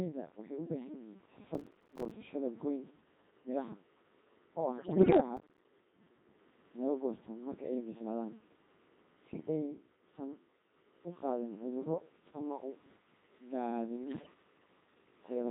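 Codec 2 vocoder coding runs through the whole clip at 2.4 kbit/s. Only pitch, voicing, energy and a spectral envelope survive, and the decoder rebuilds the speech from sine waves. The result is a heavily robotic, buzzy voice with no trace of the original waveform.

Processor overload crackle tears through the audio from 1.54 to 2.11 s. The processor misses a long run of buffer deadlines, which fits buffers of around 5 ms, and each miss drops a short hole of silence with hard edges. The result is gritty crackle riding on the speech.

Bit errors on digital voice radio hit from 4.78 to 5.20 s at a heavy error rate. Corrupted frames give the vocoder wrong pitch, level and spectrum values, so the voice lurches into bleeps, warbles and garbled robotic sounds.

Processor overload crackle returns from 5.37 to 5.65 s, a shorter burst of around twenty silent buffer misses. It is heard as rough tearing that stops once the load clears.

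Bit errors on digital voice radio strike again from 14.04 to 14.34 s. The error rate is lighter here, but the synthetic voice still jumps in pitch and tone colour and warbles briefly.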